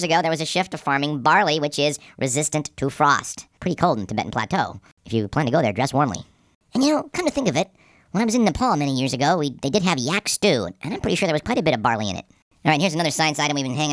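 Speech running fast and high for the whole clip, a classic wrong sample rate fault. Everything moves about 1.38 times too quickly and sits roughly 5.5 semitones sharp, so voices come out squeaky and rushed together. Because speed and pitch shift by exactly the same ratio, it sounds like audio played back at a higher rate than it was captured with no conversion in between, which fits 16 kHz material being played out at 22 kHz.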